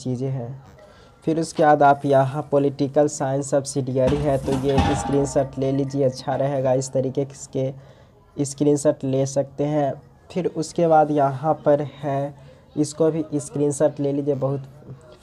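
No technical faults can be heard anywhere in the audio.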